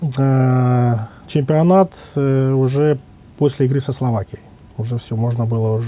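No technical faults can be heard anywhere in the signal, and nothing along the audio path breaks up, drops out or distorts.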